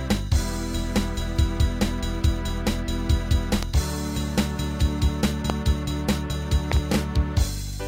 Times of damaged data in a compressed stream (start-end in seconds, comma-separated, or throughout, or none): none